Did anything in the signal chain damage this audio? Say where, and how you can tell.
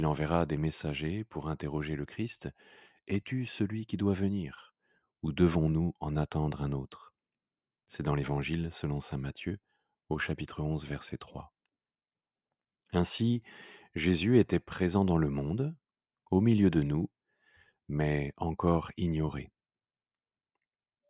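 No, nothing in the signal chain audibly damaged this speech recording. None of the stages from capture through to playback leaves any mark I can point to.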